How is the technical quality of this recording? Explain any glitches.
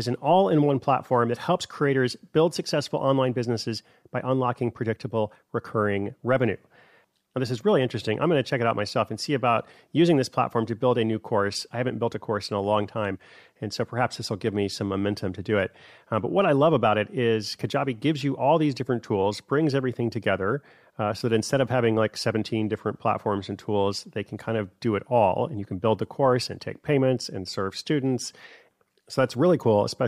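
No glitches here at all, so there's really nothing to explain in this recording.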